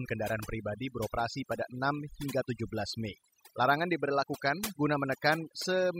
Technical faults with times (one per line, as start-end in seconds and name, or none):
0.00-5.99 overdone noise removal